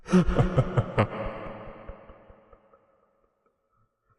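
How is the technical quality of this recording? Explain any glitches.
The technical quality is compromised by plainly audible codec damage running through the whole clip. Throughout, the sound is dull and carries a gurgling, granular roughness, most likely MP2 compression at a low bitrate, around 80 kbps. With too few bits spread across its 32 equal sub-bands, upper bands switch off and flicker back, while the remaining bands are coarsely quantised. That flickering, grainy texture separates it from a simple low-pass filter, which dulls the sound without any gurgle.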